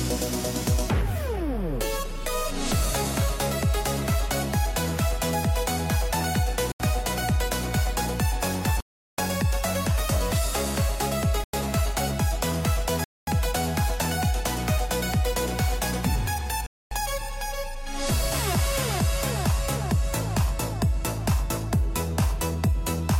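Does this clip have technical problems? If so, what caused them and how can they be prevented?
Yes. The sound cuts to silence five times, at 6.72, 8.80, 11.44, 13.04 and 16.66 s, for 82 to 379 ms, then resumes. This is likely a Bluetooth stall. Interference delayed packets and the headphone buffer ran dry. Keeping the phone close and away from crowded 2.4 GHz traffic prevents it.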